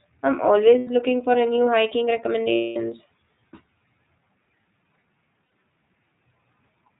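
From the start, the speech passes through the iLBC codec, and its damage is plainly audible: nothing above 4 kHz survives, and the voice has a rough, slightly synthetic edge. The 30 ms frame length points to the 13.33 kbps mode. Each frame's excitation is coded on its own, so the graininess stays steady rather than smearing across time, which separates it from the swirly, pumping artefacts of transform codecs.

Lost iLBC frames then interrupt it three times. From 0.78 to 0.87 s, just before "looking for a new", about 90 ms is replaced by a held, faintly buzzy vowel. From 2.55 to 2.77 s, right after "for a new hiking", a 210 ms gap stretches that sustain and fades it. At 5.46 to 5.52 s a 60 ms patch does the same. In each case the decoder repeats the last pitch cycle mixed with noise. Silence or clicks would point to dropouts instead. Speech resumes almost immediately after each gap, with no lingering smear, because each iLBC frame decodes on its own.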